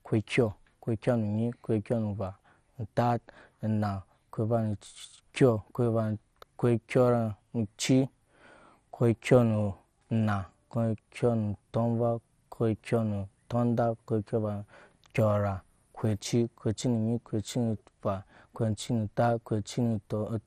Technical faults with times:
0.00-20.47 MP2 compression

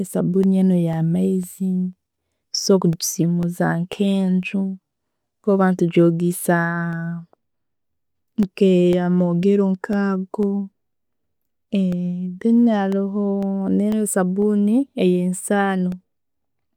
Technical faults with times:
0.43-16.42 periodic USB or driver dropouts

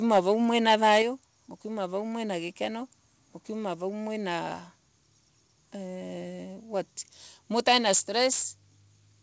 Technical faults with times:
0.68-1.02 microphone overload
1.02 microphone volume stepped down
7.67-8.00 microphone overload
7.95 microphone volume stepped down
8.32-8.45 microphone overload

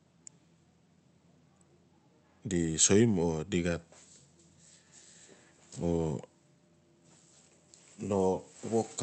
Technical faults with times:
none

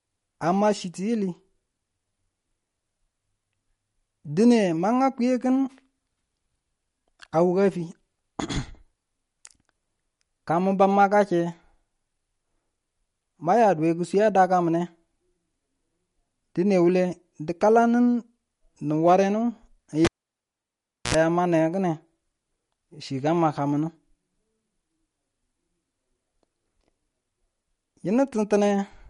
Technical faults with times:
0.00-29.10 MP3 compression
20.05-21.15 cable pulled and plugged in

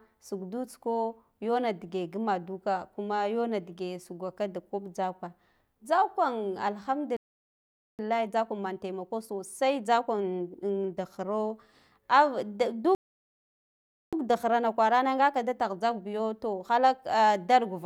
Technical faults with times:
7.17-7.99 playback stall
7.99-10.99 time-compressed catch-up
12.95-14.13 playback stall
14.13-17.13 time-compressed catch-up

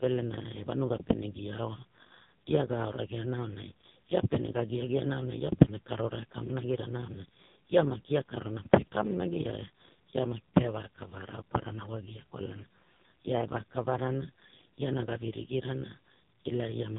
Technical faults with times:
0.00-16.99 AMR narrowband mobile codec

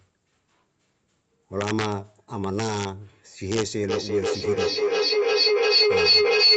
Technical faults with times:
1.61-1.92 integer overflow
2.44-2.85 integer overflow
3.52-3.63 integer overflow
3.89-6.57 feedback howl

